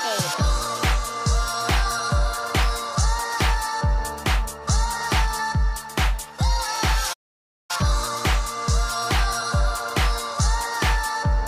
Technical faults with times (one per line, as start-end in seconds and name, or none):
7.13-7.71 playback stall
8.89-8.92 corrupt frame decoded